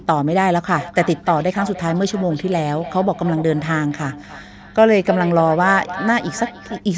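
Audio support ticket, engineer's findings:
Feedback echo between two devices, 0.77 to 6.84 s. Speech returns at roughly a third of a second intervals, repeats thinning and ringing, loudest about 12 dB below direct speech. Probable cause: second device's speaker re-entering first microphone, outside that device's echo canceller.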